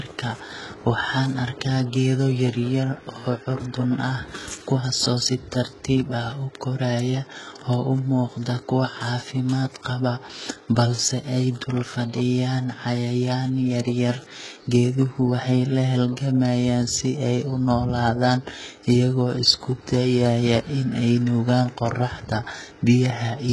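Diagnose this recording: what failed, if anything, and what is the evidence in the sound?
Codec stage: heavy HE-AAC compression throughout; nothing above 11.5 kHz, copied-up treble makes s sounds gritty, likely from a bitrate near 12 kbps.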